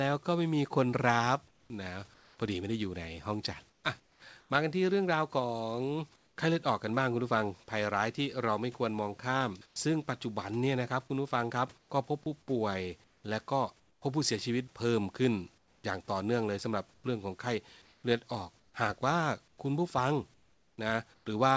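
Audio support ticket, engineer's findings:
Comfort noise in place of the background at 1.48–2.38, 3.70–4.50, 6.16–6.38, 9.66–9.76, 11.78–14.02 and 15.58–21.26 s. Room tone turns flat and featureless, about 6 dB and 4 dB quieter at 6.16 and 9.66 s. Likely sender DTX.

Sound dropped by the voice detector at 4.00–4.22 s and 12.24–12.26 s. About 80 ms and 10 ms of speech become steady noise. Likely sender VAD misclassifying speech as background.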